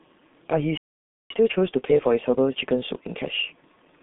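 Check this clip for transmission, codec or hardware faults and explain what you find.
Three faults are present. A low-rate codec colours the whole clip, and a silent gap is followed by hurried catch-up speech.

G.723.1 codec damage runs throughout. The speech is confined to roughly 150 Hz to 3.6 kHz, with nothing above 4 kHz. The codec models the voice coarsely in long frames. The result is muffled, hoarse speech with smeared consonants, which fits a 6.3 kbit/s rate.

A playback stall runs from 0.77 to 1.31 s. The sound cuts out mid-flow for about 0.53 s of silence. The likely cause is the player running short of data or its thread being blocked. Output then resumes.

Time-compressed catch-up follows from 1.31 to 3.41 s. The player cuts out small slices and cross-fades the remainder to clear its backlog. Speech runs 1.25 times fast at normal pitch. It sounds rushed.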